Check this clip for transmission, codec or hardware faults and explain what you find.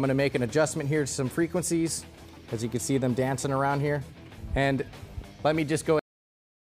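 One fault is present: a cut-off end. At 5.99 s the audio stops abruptly in the middle of a sound and drops straight to digital silence, with no decay or tail, and that silence fills the remaining 0.66 s. This happens when the final buffers of the stream are never written or played out, so the signal is truncated rather than allowed to finish. The result is an abrupt, unnatural stop.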